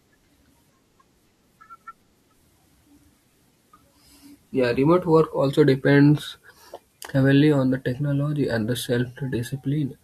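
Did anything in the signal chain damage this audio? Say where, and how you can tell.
No, nothing along the chain from capture to playback audibly damaged this speech recording. No stage leaves a trace that can be heard in the signal.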